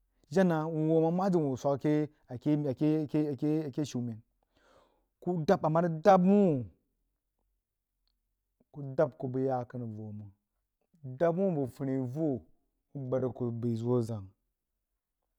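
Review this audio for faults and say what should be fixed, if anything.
From 5.83 s to the end at 15.39 s, the speech is a time-stretched section, slowed to about 0.67 times its original pace while pitch holds steady. Likely software stretching, filling the extra length by repeating short fragments, which makes the speech drag. Prevent it by re-editing to length instead of stretching the recording.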